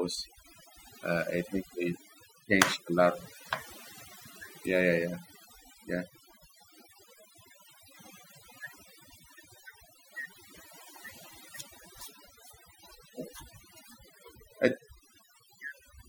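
Speech here, with overdone noise removal running the whole way through. The denoiser is clamping any frequency band that sits near its noise estimate, so the background collapses into near silence with little twinkling specks, and quieter parts of the voice get stripped too.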